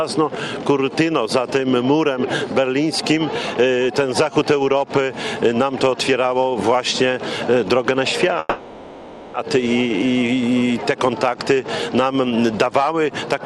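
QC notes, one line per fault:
8.39–9.36 s, call audio freeze: the sound stalls for about 0.95 s while the last fragment is stretched into a fading buzz or hiss. It then resumes where it stopped, so nothing is lost but everything after runs 0.95 s late. This is likely a jitter buffer running empty when packets arrived late.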